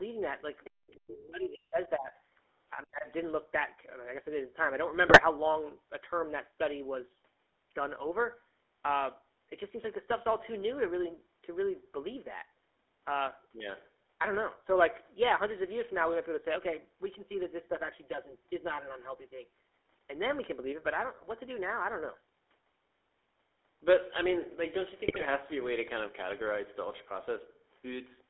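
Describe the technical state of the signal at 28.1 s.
GSM full-rate codec damage is present at 28.1 s, as it is across the entire recording. The speech has been reduced to a vocal-tract model driven by regularly spaced excitation pulses, with only every third excitation sample kept, which fits the 13 kbit/s full-rate coder. The band runs only from 300 Hz to 3.5 kHz, and the coding leaves a plainly audible buzzy, gravelly roughness. The call's microphone high-pass is normal and not part of this fault.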